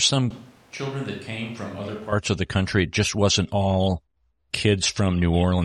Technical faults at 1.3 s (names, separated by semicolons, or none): switch to a distant microphone